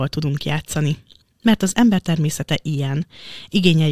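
No audible faults anywhere in the speech.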